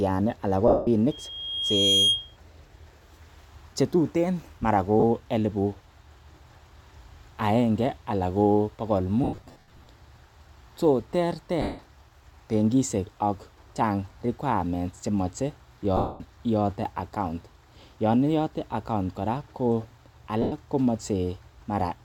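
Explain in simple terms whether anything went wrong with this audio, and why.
Yes, two things went wrong. First, lost LE Audio frames: the Bluetooth link dropped chunks of sound, and the decoder filled each gap with a noisy guess of the last sound. Brief rough, hissy patches replace the speech at 0.68–0.87 s (just after "anan ko"), 5.00–5.04 s, 9.24–9.86 s (scattered after "agenge anan ko bogol"), 11.62–11.79 s, 15.97–16.21 s and 20.42–20.52 s.

Second, a loudspeaker feedback squeal: a microphone picked up the speaker it was feeding, and that loop kept amplifying one pitch. From 1.11 to 2.37 s, shortly after "anan ko", a high whistle near 3.2 kHz swells over most of a second until it is louder than the speech.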